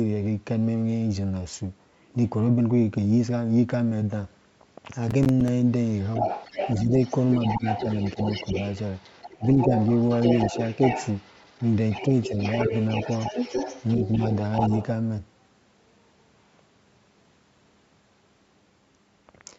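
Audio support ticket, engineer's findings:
Processor overload crackle, 5.11–5.48 s: gritty tearing from a run of missed audio deadlines, each leaving a short silent gap. Spacing fits roughly 10 ms buffers.

Other side's voice leaking through, 5.88–6.81 s, 7.01–14.36 s, 14.53–14.84 s: far-end talker audible under the main voice, about 5 dB below it in the short stretches and about 10 dB below in the long one. Likely residual loudspeaker echo the echo canceller failed to remove.

Speech suppressed in double talk at 6.85, 7.57, 9.38, 9.64 and 12.28 s: brief dips of 50–70 ms, mostly about 5 to 10 dB, with the deepest about 20 dB at 9.38 s. Likely the echo canceller ducking the near talker while the far side speaks.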